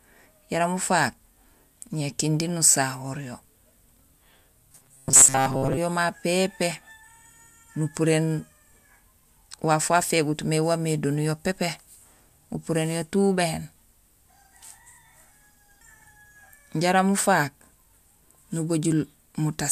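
From 4.72 to 5.78 s, just before "yo ma", the speech turns into a rigid, metallic buzz near 133 Hz. This is robotic sound from repeated short buffers. The likely cause is roughly 7.5 ms of audio being repeated in place of most incoming audio.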